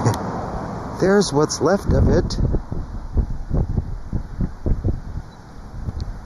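Channel delay causes comb filtering throughout. One channel lags by about 0.2 ms. Summed to mono, it leaves notches starting near 3 kHz. The sound is hollow and phasey.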